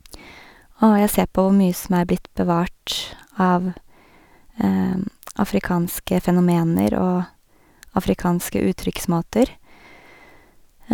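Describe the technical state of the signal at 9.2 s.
At 9.2 s the speech signal is intact, with no audible fault at that moment.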